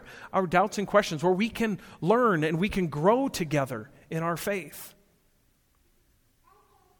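No technical faults can be heard anywhere in this recording of speech.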